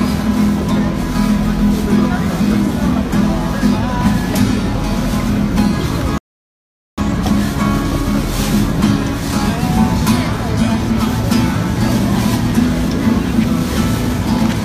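A short piece of audio with one rebuffering stall: at 6.18 s the sound drops to silence and doesn't come back until 6.98 s, then picks up exactly where it left off. So nothing actually goes missing; the player just ran dry of downloaded data and had to wait for more, which tacks roughly 0.8 s of dead air onto the timeline at that point.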